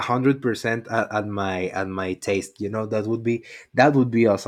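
No faults detected in this speech recording; nothing audible in the signal chain calls for attention.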